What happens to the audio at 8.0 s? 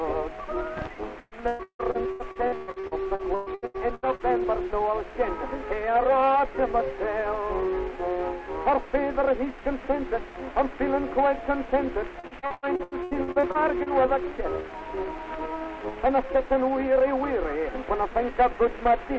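Nothing goes wrong at 8.0 s: the audio runs on intact through that moment, carried by the call path as usual with its content topping out at 8 kHz.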